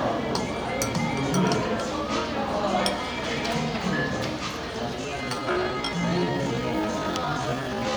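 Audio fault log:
4.97–7.96 s, time-stretched section: from this point to the end the sound abruptly slows to about 0.61 times its pace while its pitch holds steady, so it drags. Software likely lengthened this stretch by repeating short slices of audio.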